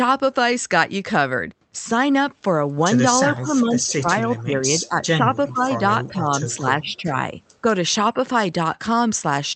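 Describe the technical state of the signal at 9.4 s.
At 9.4 s the speech is intact, carried by a normally working WebRTC call path with no fault.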